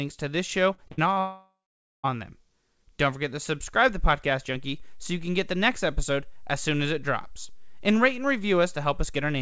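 Right after "to this", from 0.74 to 1.18 s, the speech turns choppy and robotic, with four small holes, the longest about 59 ms, and roughly a third of that stretch patched over. This is repeated packet loss: packets kept arriving too late or not at all, and each gap was filled by stretching the previous sound until real audio resumed, only for the next gap to follow almost at once.

Immediately afterwards, from 1.2 to 2.05 s, the sound smears into a fading buzz and then goes silent for about half a second before speech returns with that section simply gone. The likely cause is a long network dropout. When no audio reached the receiver for about 0.84 s, it extended the last sound briefly, let it die away, and played nothing until packets arrived again, so the lost stretch was never heard.

At 4.55 s a low thump marks a DC step, where the waveform's zero line suddenly shifts to a new offset, as when a converter recalibrates or an offset input is switched in. 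The offset then holds until the end of the clip. The speech carries on unchanged over it. Throughout, the band stops at 8 kHz, which fits a G.722 call path.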